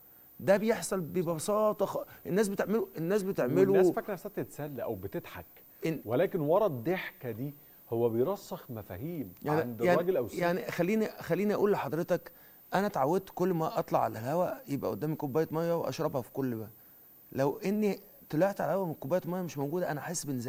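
A switching supply whistle runs through the whole clip, a thin high tone wandering between about 14.1 and 14.6 kHz and sitting roughly 25 dB below the main sound. It comes from a switch-mode power supply whose switching has dropped into the audible band, either by running in burst mode or by beating against another supply. Its pitch moves across that half-kilohertz span as the supply's load shifts, so it is heard as a faint, drifting whine above the audio.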